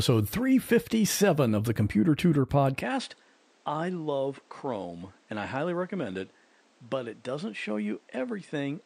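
At 2.81 s the speech changes character abruptly and stays that way to the end: content above 9.7 kHz disappears, the level falls by roughly 10 dB, and a new noise floor appears, sitting about 30 dB under the signal. There is no gap at the transition. This is most likely the input switched to a poorer device, whose narrower bandwidth, different gain and own self-noise replace the original microphone's response mid-recording.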